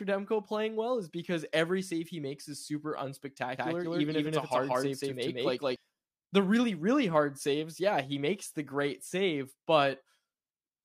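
A doubled audio track runs from 3.58 to 5.76 s, starting just before "the really really hard": an equally loud copy trails about a fifth of a second behind, likely from a second, slower capture path.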